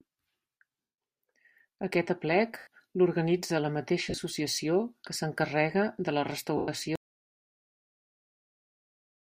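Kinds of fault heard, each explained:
Lost LE Audio frames: Four brief breaks of about 170, 90 and 110 ms, plus one where roughly 60 ms of loss is scattered over 80 ms. The decoder fills each gap by repeating the last sound with scrambled phase, giving a noisy smear instead of true silence.
Audio dropout to silence: From about 6.96 s to the end, the sound cuts off abruptly into silence, with no room tone and no decaying smear. That dead gap separates it from frame loss. The likely cause is a lost input while silence kept being written.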